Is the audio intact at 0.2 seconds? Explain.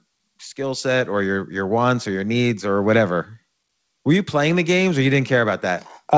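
Yes, the audio is intact at 0.2 seconds, with no fault there beyond the ordinary coding of the call path, which leaves nothing above 8 kHz.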